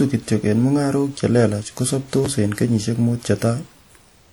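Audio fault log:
throughout, WMA compression: the speech sounds ringing and washy, with a hiss that rises and falls with the signal and smeared edges where syllables start and stop. That pattern is likely a transform codec using long blocks, so quantisation noise spreads over tens of milliseconds around each sound, while weak spectral detail is zeroed out. The damage is plainly audible and fits a low bitrate around 48 kbps, even though content extends up to about 20.1 kHz.
2.25 s, chunks out of order: a brief garbled, jumbled moment. A short piece of audio, about 5.8 ms long, plays roughly two chunk-lengths later than it should, after the pieces meant to follow it. Nothing is missing, but the wrong ordering creates three hard joins where the waveform jumps abruptly. The scrambled sequence makes the sound briefly garbled.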